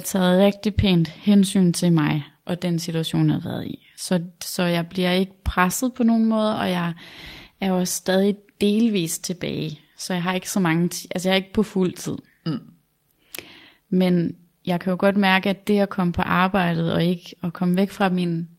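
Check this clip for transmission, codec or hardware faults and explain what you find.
One transmission fault is audible: a lost packet rebuilt from error correction at 1.41 s, between "rigtig pænt" and "til mig og den". The speech does not break. Instead, a 20 ms stretch, which fits a single lost packet, comes through rougher and noisier. The following packet carried a low-bitrate backup copy of the missing audio, and the decoder played that copy in its place. A plain concealment guess would smear or buzz, and an unrepaired loss would leave a gap. Here the right sounds are still there, only coarser.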